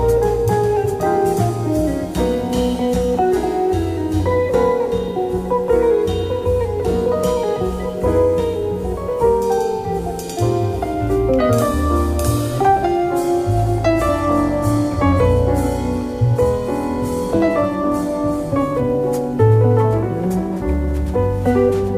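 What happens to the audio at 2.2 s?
Nothing goes wrong at 2.2 s; the audio plays through that moment intact, with no dropout, click or distortion.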